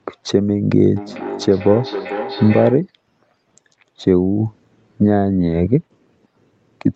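From 0.96 to 2.88 s the speech comes round again as feedback echo between two devices. One device replays the call into another's microphone, so the speech repeats roughly 0.4 s later, up to about 10 dB below the speech, thinner and more ringing than the original.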